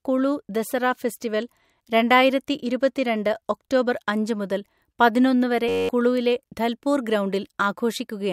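At 5.69 s the speech stops and a steady buzz takes over until 5.89 s. This is a system hang loop: the host stalled while the sound hardware kept replaying one 10.67 ms slice of its ring buffer, which fits a 512-sample buffer, 19 times over at a 93.8 Hz loop rate, and about a fifth of a second of audio is lost. The waveform shows one identical cycle repeated, and the spectrogram shows evenly spaced harmonic lines at multiples of 93.8 Hz.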